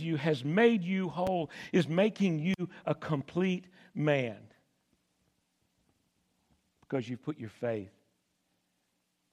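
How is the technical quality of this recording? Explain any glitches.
The recording has one clear glitch, a single loud pop early in the speech. A loud pop occurs from 1.27 to 1.30 s. A sudden voltage step or pulse, likely from a plug, switch, static discharge or driver hiccup, was added to the signal and shaped by the circuitry downstream. It is heard as one sharp, brief pop, peaking roughly 10 dB above the speech, while the speech continues underneath without interruption.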